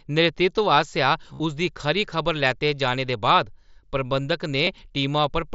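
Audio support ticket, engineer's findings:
Concealed Bluetooth headset packet loss, 1.34–1.40 s: short buzzy held tone across about 60 ms, longest continuous run near 38 ms, slight warble on recovery. Points to lost headset-to-phone voice frames, gaps filled by repeating the best-matching recent waveform slice.

Concealed Bluetooth headset packet loss, 4.65–4.67 s: brief 15 ms patch. Same concealment, shorter run. mSBC wideband path audible up to 8 kHz with light grain.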